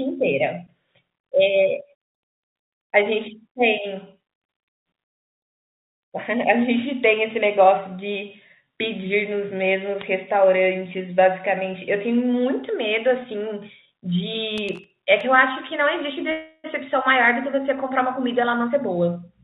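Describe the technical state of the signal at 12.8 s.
At 12.8 s the signal is intact, with no fault, only the narrow call-path bandwidth typical of G.711 that leaves nothing above 4 kHz.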